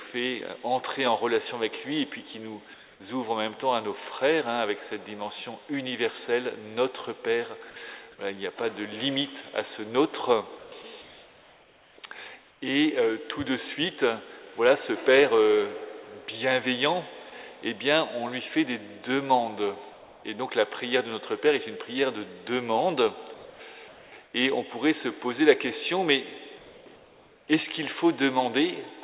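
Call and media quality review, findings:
Comfort noise in place of the background at 2.74–3.0, 10.58–10.72, 11.02–11.98, 12.5–12.62, 19.92–20.24, 23.34–23.6, 23.88–24.34 and 26.58–27.48 s. Pauses filled with steady, featureless hiss, not true silence as in a gate or dropout, and about 1–4 dB quieter. Likely DTX with receiver-side synthetic noise. Band-limited to 4 kHz throughout, which fits a G.711 call path.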